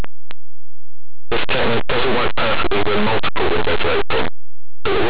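Very loud, harsh distortion runs through this speech clip from start to finish: linear audio read as companded, with plain 8-bit linear samples expanded as mu-law codes, so tiny values on one side of zero swing to extremes while those on the other side stay small.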